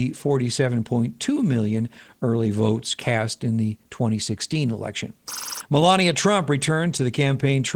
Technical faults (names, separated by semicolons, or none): Opus voice compression